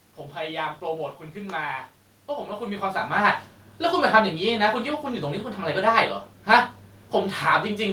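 No technical faults are audible.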